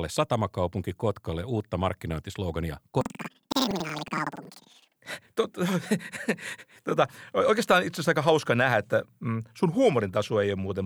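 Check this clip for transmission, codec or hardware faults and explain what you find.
One fault is present, a stretch of planar audio read as interleaved. From 3.01 to 5.04 s, right after "uutta markkinointislogania", the speech jumps an octave higher with a flutter at about 10.8 Hz. Each block of about 93 ms, which fits a 4096-sample block, holds all left samples followed by all right samples. Read as alternating pairs, each block plays twice at double speed, left then right. Unlike a simple speed-up, the overall pace stays correct, and the repeat rate produces the flutter.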